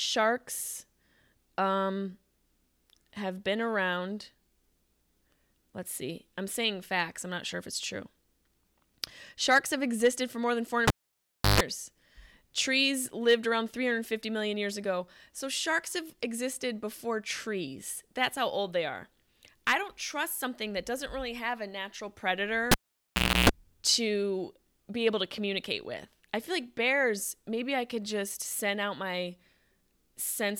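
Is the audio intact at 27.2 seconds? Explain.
Yes, at 27.2 seconds the speech is intact, with no audible fault at that moment.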